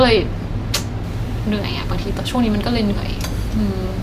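Pre-emphasis left on, from 1.04 s to the end of the speech: a treble boost applied before recording was never undone by the matching de-emphasis, so high frequencies stay lifted by about 8 dB at 10 kHz relative to 1 kHz. The shape of the rise fits the CD 50/15 µs curve. From that point the sound turns thin and overly bright, with sibilants hissing and sharpened while the low end feels lighter than before.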